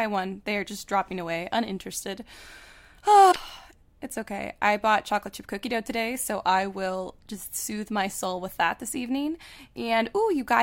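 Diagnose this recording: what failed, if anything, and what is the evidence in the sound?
Codec stage: damaged data in the compressed stream around 3.28 to 3.36 s gives a brief glitch as the decoder loses sync and skips ahead to the next frame.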